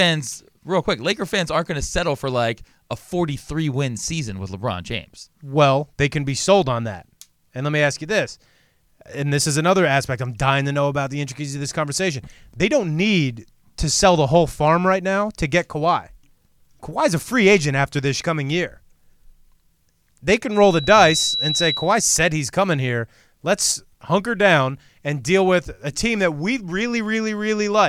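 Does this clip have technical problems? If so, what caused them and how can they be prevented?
Yes. A loudspeaker feedback squeal runs from 20.51 to 22.09 s and ends just before "he's coming here". A single 3.9 kHz tone swells over a little under a second until it is about as loud as the speech. The microphone was picking up the loudspeaker it was feeding, and at that frequency the loop gain exceeded one, so the tone kept reinforcing itself. Reducing microphone gain, moving the speaker away from or behind the microphone, and notching 3.9 kHz would prevent it.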